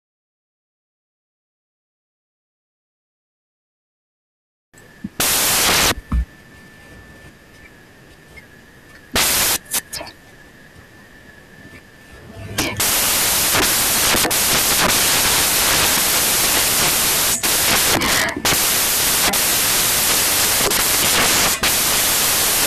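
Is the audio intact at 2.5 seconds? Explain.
No. At 2.5 seconds, as throughout the clip, the samples are built from the wrong bytes. Each value is assembled in the wrong order or alignment, so the fast-changing low bits dominate. The speech comes with loud, harsh broadband noise, close to white on loud sounds.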